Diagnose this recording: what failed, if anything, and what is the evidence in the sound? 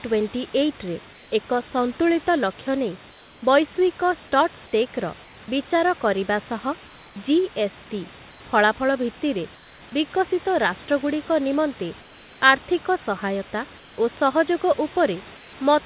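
Call processing: in the pauses at 1.13–1.32, 3.11–3.42, 5.24–5.48, 8.31–9.81, 12.01–12.42, 13.78–13.98 and 15.37–15.53 s, the room background turns into comfort noise, steady and featureless, and in most of them about 2 to 3 dB quieter. This is likely discontinuous transmission. A dropout would leave silence, not a smooth noise bed.

Call processing: at 5.46 s, for about 20 ms, sound is cut by the voice detector and replaced with comfort noise, losing roughly 10 ms of sound. The likely cause is the detector mistaking the sound for background. Unlike packet loss, the gap is filled with steady noise, not silence or a repeated fragment.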